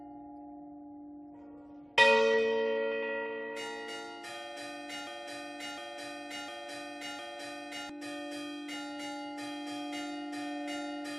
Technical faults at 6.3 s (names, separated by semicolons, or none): broken-record loop